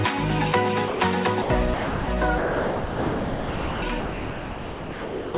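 At 0.88 to 1.0, 1.42 to 1.5, 1.74 to 2.08, 2.38 to 3.82 and 4.0 to 5.34 s, the sound, band-limited to 4 kHz, gives way to steady, featureless comfort noise. This is likely sound dropped by the voice detector. Unlike packet-loss concealment, there is no smeared or repeated fragment, only a clean switch to noise.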